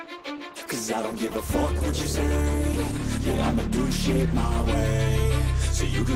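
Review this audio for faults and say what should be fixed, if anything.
From 0.0 to 4.66 s the stream starts at a low bitrate. Treble is thin and artefacts are stronger, which fits about 16 kbit/s Opus. Quality then jumps cleanly, near 64 kbit/s, with no gap. To prevent it, start on a higher-bitrate rendition.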